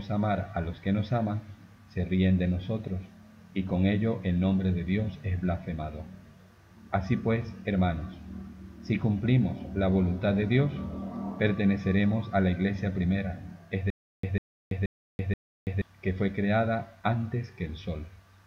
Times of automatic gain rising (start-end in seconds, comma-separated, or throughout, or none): none